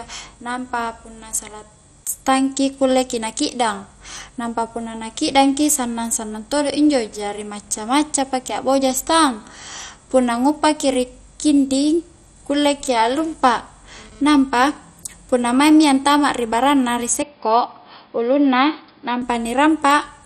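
Throughout the speech, the sound is dull and granular, with a gurgling, flickering quality in the upper range and nothing above about 15.2 kHz. This is likely MP2 compression. The damage is heavy, which fits a low bitrate around 56 kbps starving the upper sub-bands of bits.

From 13.22 to 14.77 s, a GSM phone buzz cuts in: a hard, raspy tone at 217 Hz with many harmonics, about 28 dB below the speech. A nearby 2G phone doing a data transfer is transmitting in bursts, and the audio circuit rectifies those radio pulses.

At 17.22 s the sound turns boxy and narrow, with nothing above 5.1 kHz, until 19.22 s. The likely cause is an input switched to a poorer device. The change happens without a gap, the level stays about the same, and a faint new noise floor appears well below the signal.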